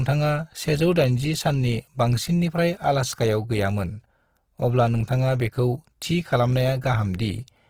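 From start to end the speech carries plainly audible coding damage, most likely Opus compression in its music (CELT) mode. The encoder is short of bits, so rather than leaving gaps it fills starved bands with folded copies of lower ones or with noise, making tones grainy, rough and hissy. That graininess separates it from MP3, which would swirl and warble. The full bandwidth stays open, and the roughness points to a rate near 16 kbps.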